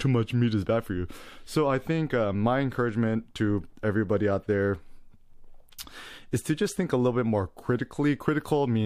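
No technical faults can be heard anywhere in the speech.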